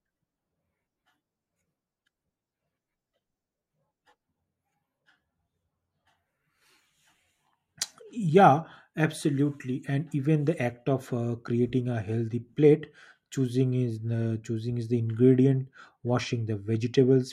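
No technical fault turns up anywhere in the recording; the speech signal stays intact and continuous throughout.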